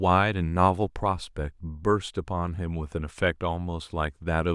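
No audible technical faults anywhere in the speech recording.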